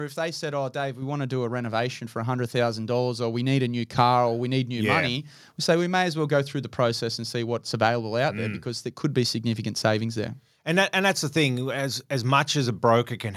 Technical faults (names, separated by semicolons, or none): microphone volume stepped up